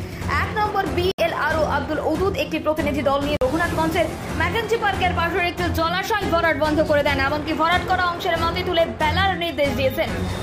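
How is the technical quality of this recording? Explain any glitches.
The recording has two audible dropouts, both blocks of digital silence. At 1.12 to 1.18 s (about 70 ms) and 3.37 to 3.41 s (about 46 ms, which fits a 2048-sample buffer), the output buffer likely went unfilled and zeros replaced the sound. Each cuts abruptly to silence and back around a brief hole.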